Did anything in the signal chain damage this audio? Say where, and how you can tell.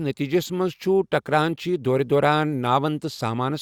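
No, nothing damaged this audio.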